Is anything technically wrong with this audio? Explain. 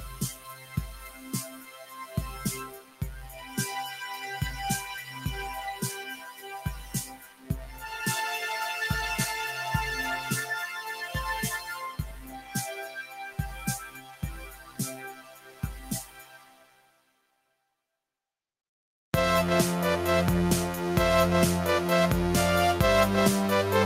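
Yes. A speech-style noise suppressor has been left running on material it wasn't built for, so it keeps mistaking steady, sustained parts of the sound for noise and pulling them down. Across the clip the level swings by around 20 dB, which makes the sound pump, flutter or thin out.

There are four stretches where the suppressor cuts the sound harder than the rest: 0.29 to 3.58 s, 5.0 to 5.24 s, 5.96 to 7.5 s, and 10.76 to 17.76 s. Held and decaying parts sink, with drops of about 16, 6, 15 and 16 dB respectively, while sharp onsets mostly slip through. The longest stretch loses several seconds of sustain in total.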